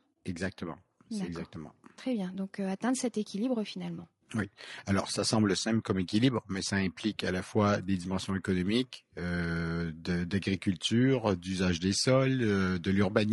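From start to finish the speech sounds rough and grainy, with a hiss-like fill sitting between the pitch harmonics and a dull top end. The degradation is plainly audible throughout. This is likely low-delay AAC compression of the kind used for video calls: very short frames resolve voice harmonics poorly and consume bits, and the damage here points to a bitrate around 32 kbps, too lean for clean speech.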